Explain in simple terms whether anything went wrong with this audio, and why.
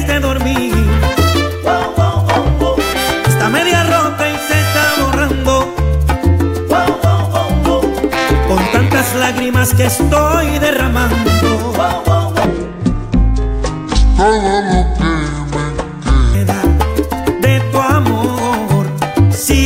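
From 12.45 to 16.35 s the sound suddenly turns slow and much deeper, nearly an octave lower, then snaps back. This is a section at the wrong speed: that stretch plays at about 0.59 times normal speed, likely because it was fitted to the wrong clock.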